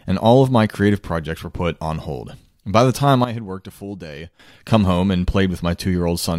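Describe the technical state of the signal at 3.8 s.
At 3.8 s the level sits about 12 dB low inside a sudden gain jump from 3.24 to 4.40 s, after "the time". Speech and background noise step down and back together with no ramp, unlike a fade, likely from a gain change applied instantly.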